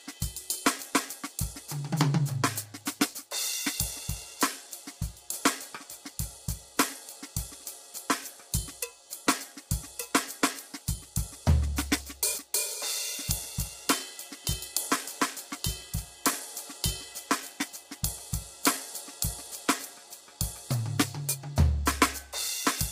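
Low-delay AAC compression throughout: short coding frames at roughly 24 kbps likely leave the music rough and grainy, with noise between harmonics and nothing above 15.6 kHz.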